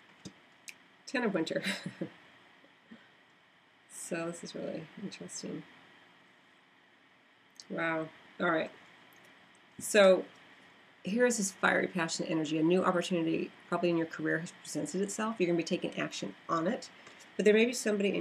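No technical faults can be heard anywhere in the audio. Nothing breaks up, drops out or shifts from beginning to end.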